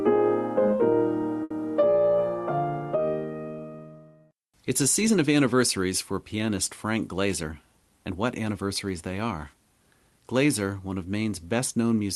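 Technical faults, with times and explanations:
1.43 to 1.52 s, short stall from a late packet: the sound briefly hangs, one moment held about 70 ms too long with a faint buzzy sameness. A packet arrived late, the jitter buffer ran dry, and the receiver stretched the last audio until it came, skipping nothing.
6.96 to 7.53 s, jitter buffer speed-up: the sound briefly hurries, running at about 108% speed with its pitch unchanged. After delayed packets piled up, the receiver trimmed roughly 50 ms in total by cutting tiny pitch-period slices in quick succession to shrink the backlog.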